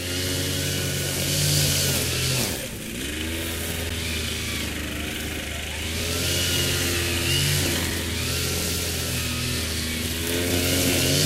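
A clip of sounds with a gap between stream segments at about 3.9 s: a hard-edged silence of roughly 11 ms, where the timestamps of two segments, which look to be about 4 s long, don't quite meet, so the player pads the hole with silence instead of losing anything.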